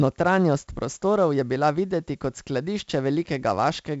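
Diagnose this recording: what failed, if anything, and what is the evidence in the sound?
The codec stage failed, through 4-bit ADPCM compression applied across the whole clip. A gritty hiss rides on the speech and rises and falls with its level. It is loudest on strong syllables, and sharp onsets sound roughened. Each sample is coded as a coarse 4-bit step from a prediction, so the step size cannot track fast changes. Nothing is heard above about 7.7 kHz. That points to a 16 kHz rate and fits 64 kbps.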